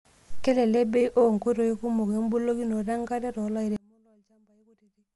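A speech recording with two faults. The whole clip is dull and rough. Nothing reaches above 11.5 kHz, and there is a grainy, fluttering noise hanging around the voiced sounds. This is plainly audible codec damage, most likely from Dolby Digital compression at a low rate, which fits a 64 kbps stream. At that rate the encoder cuts the top of the band. It also starves many frequency lines of detail, and the decoder fills them with noise. From 3.76 s to the end, the voice suddenly collapses by about 33 dB, leaving only a faint residue. That points to one channel inverted in polarity. When the two channels are summed to mono, the centred voice cancels almost completely. Only the small differences between left and right survive.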